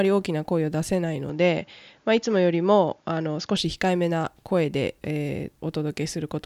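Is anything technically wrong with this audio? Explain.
Yes. From 1.29 to 3.57 s the input likely switched to a poorer device. Nothing above 7.1 kHz gets through, so the speech turns duller without a gap, then clears.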